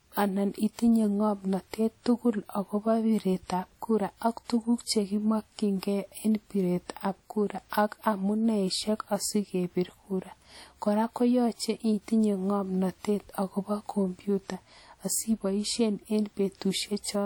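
All the way through this speech there's plainly audible transform-codec damage, with likely WMA compression as the culprit, and the wear is consistent with a fairly low bitrate around 48 kbps. The quantisation noise smears over tens of milliseconds, so the sound rings and the voice takes on a washy edge, with a hiss that swells and fades along with the talking. The top end still reaches about 20.1 kHz.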